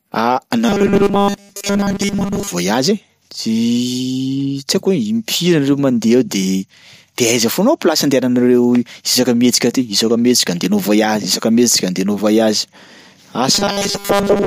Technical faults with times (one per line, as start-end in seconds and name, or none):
0.69-2.50 robotic sound from repeated short buffers
13.55-14.46 robotic sound from repeated short buffers